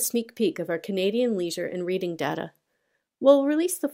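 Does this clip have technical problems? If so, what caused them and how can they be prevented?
No, this clip has no technical problems, so there is nothing to trace back to a cause or to prevent.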